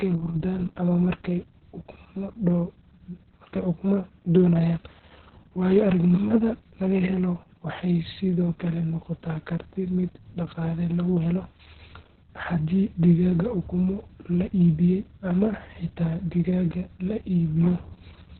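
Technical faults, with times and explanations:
Throughout, Opus voice compression: the speech is heavily coded in narrowband SILK mode, with nothing above 4.3 kHz, so it sounds muffled, hoarse and slightly robotic. The coarse excitation coding fits 60 ms frames at a very low bitrate of about 6 kbps.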